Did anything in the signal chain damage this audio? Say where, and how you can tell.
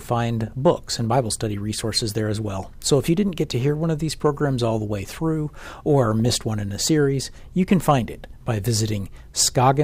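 Yes. DAB burbling from the broadcast reception and MP2 decoding stage: brief noise blips in single sub-bands sit over the speech at 0.47 to 0.53 s and again, longer, at 6.12 to 6.34 s. Weak reception let bit errors, at a rate of a few tenths of a percent, slip past error correction; corrupted samples put short noise blips in individual sub-bands, and corrupted scale factors make sub-bands jump in level for up to a frame. A spectrogram shows isolated bright rectangular blocks in narrow bands, and the waveform shows sudden bursts.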